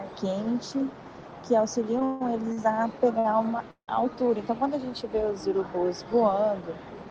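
The audio hits two call audio freezes, at 2.05 to 2.22 s and 3.71 to 3.90 s. Each is about 160 to 170 ms of fading hold, with the second fading into roughly 100 ms of silence, likely from held-up packets. There are also two short stalls from a late packet, at 2.52 and 3.19 s, where a sound stretches 44 and 58 ms before resuming with nothing lost.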